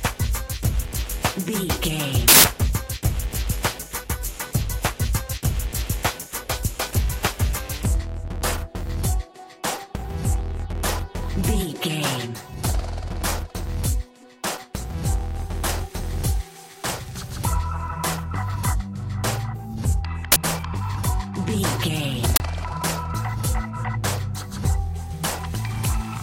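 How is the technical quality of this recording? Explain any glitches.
The recording is marred by three uninitialised buffer bursts: a 160 ms one from 2.28 to 2.44 s, and two 40 ms ones at 20.32 to 20.36 s and 22.36 to 22.40 s. Each time, a block was played out before any audio had been written into it, so stale memory came through as samples. The result is a sudden, loud crack, or for the longer 160 ms block a burst of digital noise, that has nothing to do with the surrounding sound, unlike clipping, which distorts the signal that is already there.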